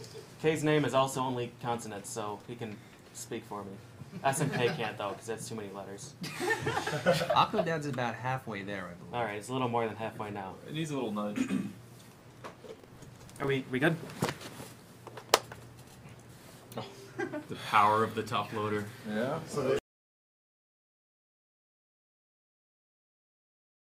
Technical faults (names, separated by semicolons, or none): buffer tearing